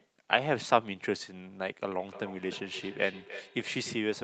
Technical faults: feedback echo between two devices

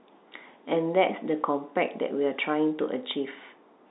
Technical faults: none

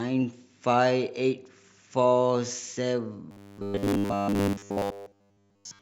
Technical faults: robotic sound from repeated short buffers

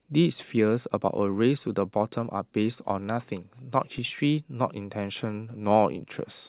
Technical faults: DC step

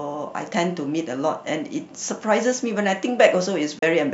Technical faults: digital broadcast dropout

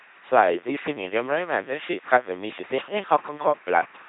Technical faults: mains buzz; LPC-10 vocoder

